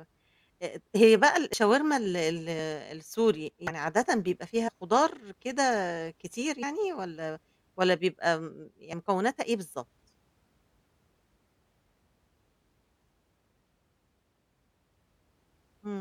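A speech clip with compressed frames skipped at 1.53 s, 3.67 to 3.72 s, 4.67 to 4.70 s, 6.62 s and 8.92 s. Each time the speech jumps ahead. Around 70 ms goes missing at the first point and roughly 100 ms at each later one. Whole frames were never decoded, either missing from the file or rejected as damaged.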